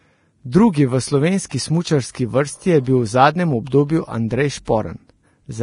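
Heavy lossy coding, likely Vorbis at a bitrate that fits about 30 kbps, has stripped this speech clip of everything above 10.5 kHz and quantised the remaining treble coarsely, so the sibilants and upper detail turn hissy and grainy, with roughened tonal parts and softened consonant onsets. The same block-based transform also produces pre-echo, spreading its quantisation noise ahead of sharp attacks. A short hiss of 21 ms runs from 1.49 to 1.51 s, one of 43 ms from 2.10 to 2.15 s just before "vrsti je", and one of 25 ms from 4.65 to 4.67 s, each smearing the attack that follows.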